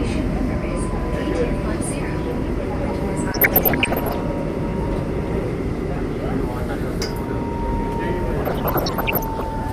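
A recording of everyday sounds. Throughout, the top end sounds dull and the texture is granular and gurgling. That is plainly audible MP2 compression, likely at a low rate. The grain fits about 80 kbps, where upper sub-bands get too few bits and drop out. DAB burbling appears from 3.30 to 4.21 s and again from 8.45 to 9.46 s. Bit errors, around one in a hundred, slipped past error correction. Corrupted samples put short blips of noise in single sub-bands.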